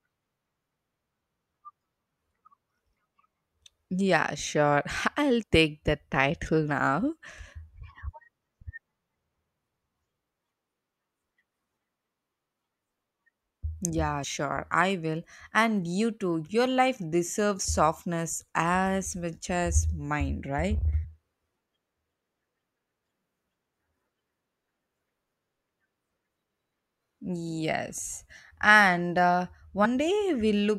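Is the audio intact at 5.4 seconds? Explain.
No, not quite. At about 5.42 s there's a case of compressed frames skipped: a few frames of the encoded speech never get played, whether they were missing from the file or the decoder threw them out as damaged. The jump looks like roughly three frames, about 70 ms of audio, which fits a codec frame of around 21 ms. You hear a small jump forward where that audio should be.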